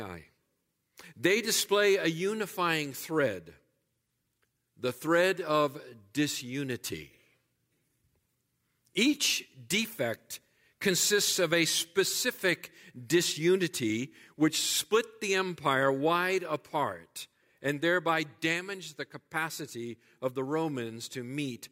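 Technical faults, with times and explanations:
0.0 to 15.2 s, sample clock jitter: the converter clock wavers by a few microseconds, so samples land early or late, and the error grows with waveform slope. The speech carries a hiss about 25 dB down that follows loud, bright sounds and vanishes in pauses. On a spectrogram it shows as a haze over the speech energy.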